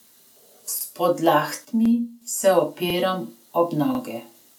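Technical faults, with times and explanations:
0.81–0.86 s, 1.86–1.90 s, 2.90–2.95 s, 3.95–4.00 s: overlapping chunks. Each 1.0 s chunk begins about 48 ms before the previous one ended, so that slice of speech plays twice at every join, producing a brief stutter or click recurring at regular intervals.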